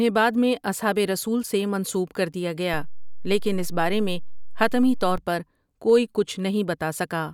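At 2.74 s, right after "رسولؓؐ سے منسوب کردیا", there's a DC step: the waveform's zero line suddenly jumps by an offset of about -25 dBFS, like a converter recalibrating or an offset input getting switched in. You hear it as a low thump. The offset holds until 5.18 s, then snaps back with another thump just before "پر کوئی". The speech itself carries on unchanged across both.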